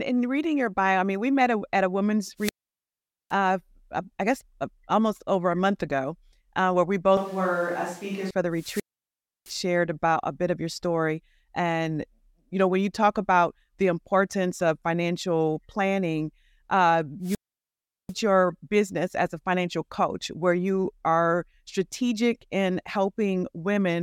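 At 2.37 s a swell of hiss leads into a hole of near silence lasting about 0.81 s, and the speech returns by 3.34 s. This is a wireless microphone squelch dropout: the analogue FM radio link weakened until the receiver's squelch muted the output, then reopened once the signal recovered.

From 7.17 s to 8.31 s, starting after "ago uh where we", the speech abruptly turns roomy and hollow, with thinner bass. It drops about 5 dB in level, and room noise rises to roughly 25 dB below the speech. The close sound snaps back just before "for the". This points to a switch to a distant microphone, likely because the close microphone's feed was briefly lost.

Right after "for the", a second squelch dropout follows at 8.52–9.62 s. It has the same hiss and then a mute of about 0.66 s before "about a bit of". A third, at 17.21–18.15 s, opens after "of financial planning uh" and silences the output for about 0.74 s before "your business as a".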